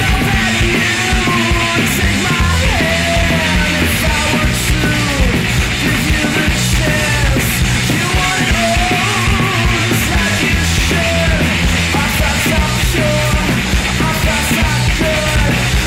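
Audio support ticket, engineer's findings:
Hard clipping throughout. Fuzz on louder passages. Some gain stage (converter, number format or later stage) overdriven by about 7 dB; around a tenth of samples cut flat. Waveform: squared-off peaks. Spectrogram: extra harmonics smeared high up on loud moments.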